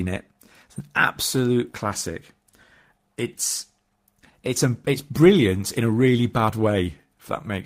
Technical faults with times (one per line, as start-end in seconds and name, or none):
0.00-7.65 clock drift between sender and receiver
0.34-7.49 repeated timing corrections